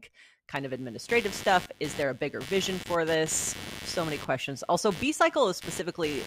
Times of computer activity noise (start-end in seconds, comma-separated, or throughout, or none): 0.56-6.26